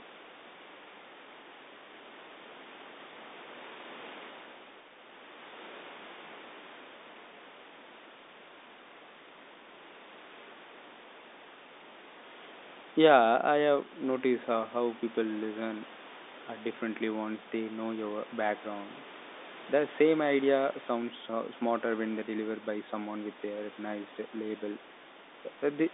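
Nothing stood out on listening; the speech arrives through the narrow band of the G.711 telephone line, which carries sound only from about 250 Hz up to 3.7 kHz.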